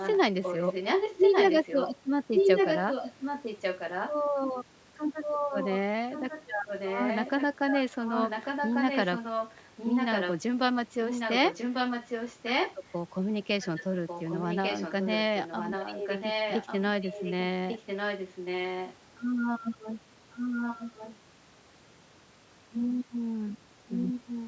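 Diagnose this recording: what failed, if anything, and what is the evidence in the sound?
A delayed copy of the speech trails it by about 1.15 s, at times nearly as loud as the original and elsewhere somewhat quieter, during 0–4.1, 5.2–10.4, 11.1–12.9, 13.6–19.0, 20.3–21.2 and 23.9–24.5 s. This is an echo leak in call processing, likely from a loudspeaker-side echo canceller failing to remove its microphone pickup.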